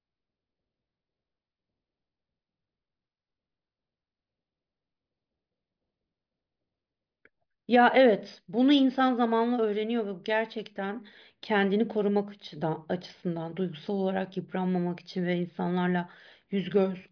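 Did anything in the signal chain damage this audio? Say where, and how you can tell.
No, nothing in the chain seems to have left a mark on this one; the speech comes through without anything I'd pin on a stage along the way.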